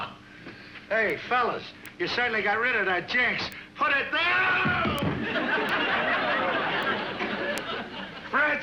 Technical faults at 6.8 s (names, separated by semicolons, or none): bit error spike